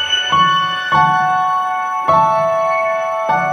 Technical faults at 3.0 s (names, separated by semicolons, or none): audio read two samples at a time (double speed)